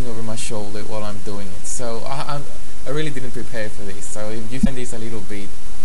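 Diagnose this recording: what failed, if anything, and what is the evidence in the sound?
Codec stage: damaged data in a compressed stream at 4.61–4.67 s; the decoder misreads frames and resyncs, leaving a brief glitch.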